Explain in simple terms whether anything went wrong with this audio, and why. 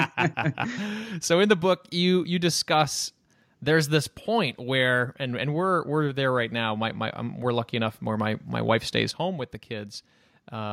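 Something likely changed the volume setting all at once instead of easing it in, a sudden gain jump. At 9.11 s, right after "my my wife stays", the speech and the background noise both drop to a much quieter level together and stay there until the end.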